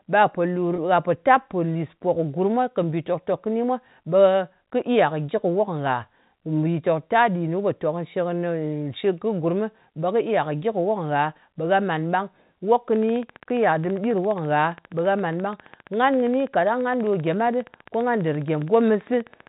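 At 0.76 to 0.78 s there is a brief packet loss with pitch repetition. About 20 ms of audio went missing, which fits a single lost packet, and the decoder filled the hole by repeating the last pitch period of the speech. The result is a tiny held, slightly buzzy moment rather than a dropout. On a spectrogram the harmonics run flat and unchanging for that sliver. In the waveform, identical cycles repeat back to back.

From 12.96 s to the end of the recording at 19.48 s, a train of clicks runs over everything at a steady 14.9 per second, around a hundred in all, in pauses as much as under the speech. The pulses reach roughly the level of the speech itself and sound like an even ticking. They are likely interference from nearby equipment or a faulty connection. On a spectrogram they show as evenly spaced thin vertical lines, and in the waveform as sharp spikes. Beneath it all, the narrow telephone band of G.711 coding stops everything above 4 kHz.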